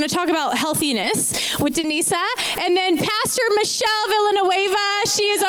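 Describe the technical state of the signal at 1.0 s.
At 1.0 s the audio briefly smears, a short wobble lasting from about 1.01 to 1.05 s where the sound seems to hang on itself before blending back. This is short concealed packet loss: roughly 20 ms of the stream arrived too late to be decoded, so the receiver invented a stand-in by extending what it had just played, then cross-faded into the real signal again. Whatever briefly occupied that gap is replaced by the continuation and may be lost.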